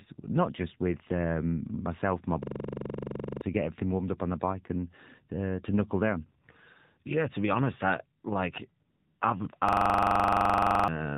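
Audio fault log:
Throughout: AMR narrowband mobile codec. The speech passed through a mobile speech codec at 7.4 kbps, which discards everything above 4 kHz and rebuilds the voice from a vocal-tract model excited by sparse pulses, so it sounds muffled, buzzy and synthetic.
2.43 to 3.41 s, 9.69 to 10.88 s: system hang loop. The system froze while the audio hardware kept replaying one 42.67 ms block, which fits a 2048-sample buffer, 23 and then 28 times. The result is a rapid stutter at 23.4 Hz, and about a second of real audio is lost each time.
8.90 to 9.20 s: AMR comfort noise. The phone judged the talker silent and sent no speech frames for 300 ms, so the receiver filled the gap with generated noise. The real background is replaced by a smooth, steady hiss that switches in and then drops out.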